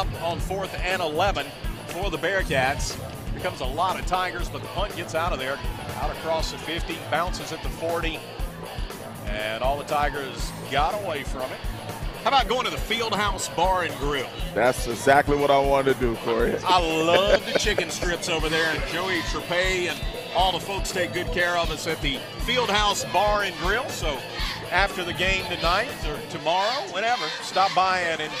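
No technical faults can be heard anywhere in the clip. Nothing in the audio breaks up, drops out or changes character at any point.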